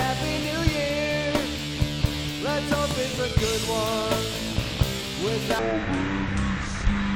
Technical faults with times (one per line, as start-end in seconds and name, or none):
5.59-7.15 section at the wrong speed